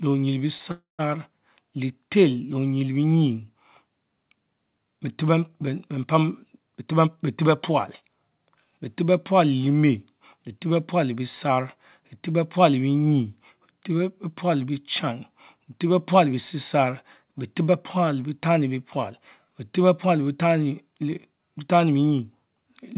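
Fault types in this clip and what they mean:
Call audio freeze: Packets were most likely held up in transit, so the receiver's jitter buffer ran dry from 0.71 to 1.01 s. The receiver stretched the last sound into a fading fill for about 0.27 s, and the final 150 ms of that stretch went fully silent. When packets resumed, the speech picked up exactly where it had stopped. Nothing is lost, but a gap has been inserted, and everything after it arrives about 0.27 s later.
Jitter buffer speed-up: The buffer held more audio than its target, so from 6.59 to 8.79 s the receiver repeatedly cut out short pitch-period-sized slices to shed the extra delay, about 0.2 s in all. The speech runs at 109% of its normal rate with its pitch unchanged, so that stretch sounds hurried. Throughout, the audio carries nothing above 4 kHz, which fits a narrowband G.711 call codec.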